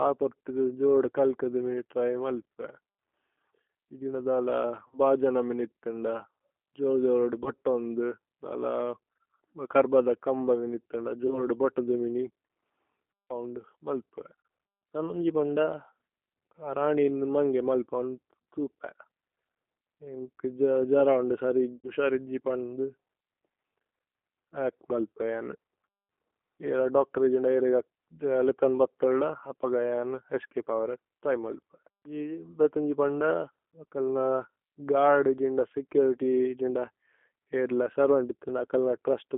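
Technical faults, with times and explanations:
Throughout: G.729 codec. The speech is squeezed into a telephone band of roughly 250 Hz to 3.4 kHz and rebuilt at 8 kbit/s from a vocal-tract filter, a pitch predictor and sparse pulses, so it sounds plainly rough and synthetic. A spectrogram shows a hard ceiling near 3.4 kHz and smeared harmonics.
4.88–4.99 s, 7.44–7.51 s, 11.27–11.44 s (before "ബോതുദു മിനി"), 14.41–14.47 s (before "തനോന്ജി പന്ദ"), 21.76–21.91 s (between "ജര ഓന്ദു" and "സരിജു പന്ദു"): VoIP packet loss concealed by the speech codec. About 20 to 80 ms of audio went missing each time, which fits one to four lost 20 ms packets, and the decoder filled each gap by extending its last pitch and filter with falling gain. The result is a brief buzzy tone or coloured noise that fades, and the speech stays weak for a moment afterward while the decoder recovers. On a spectrogram, each gap shows a stretched, fading continuation of the sound before it. 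In the waveform, the envelope decays and then takes a moment to build back up.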